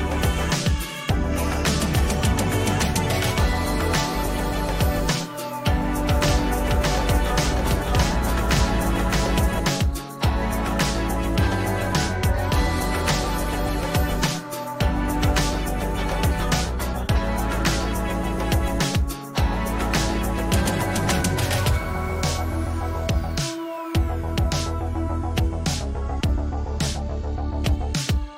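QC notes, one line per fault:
6.08 to 9.60 s, doubled audio track: an equally loud copy trails by roughly 0.7 s with no decay, most likely a second capture path.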